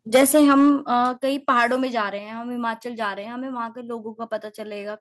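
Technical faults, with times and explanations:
0.14–0.7 s and 1.48–1.65 s, microphone overload: the loudest syllables turn harsh and crackly, pushing about 7 dB past the converter's limit in the first stretch and about 2 dB in the second. The likely cause is input volume set too high. The waveform shows flattened, squared-off peaks, and the spectrogram shows broadband vertical smears at those peaks.
0.16 s, 1.17 s and 2.19 s, microphone volume stepped down: speech and background both drop abruptly, by about 2 dB, 6 dB and 3 dB. The likely cause is call software cutting the device's input gain after sensing clipping. The waveform envelope shrinks in one clean step, and the spectrogram darkens evenly across all frequencies.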